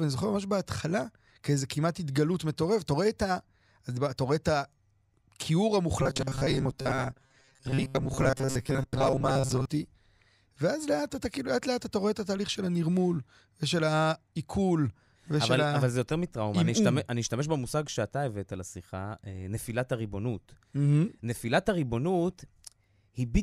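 From 6.03 to 9.65 s the speech turns into robotic sound from repeated short buffers: a rigid metallic buzz at 134 Hz. The likely cause is a roughly 7.5 ms segment looped over about half the audio.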